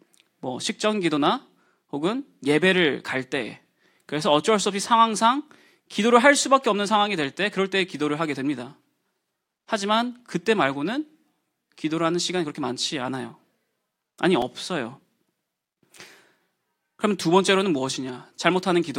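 At 14.42 s the speech has a tiny click with a brief buzzy edge, too short to register as a stutter. This is a repeated buffer: fresh audio did not reach the output in time, so the device replayed its last block twice more, sounding one slice three times with a hard join at each seam. Each slice lasts about 2.9 ms, which fits a 128-sample buffer, and essentially no audio is lost.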